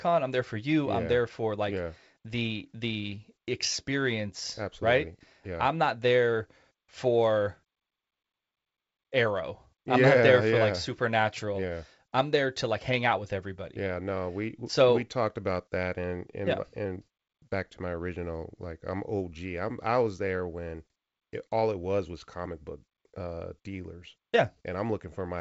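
No faults found in this speech; the band stops at about 7.7 kHz with the light upper-band hiss of G.722 wideband telephone coding, and the slightly noisier lower band fits its 56 kbit/s mode.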